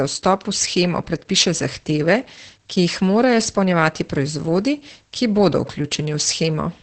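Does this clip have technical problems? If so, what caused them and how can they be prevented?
Yes. Heavy Opus voice compression runs throughout this speech. The SILK coder works in wideband, so the spectrogram shows nothing above 8.7 kHz, and coarse excitation coding leaves harmonics smeared and the voice muffled, hoarse and faintly robotic, which fits a bitrate near 10 kbps. Encoding at 24 kbps or more prevents it.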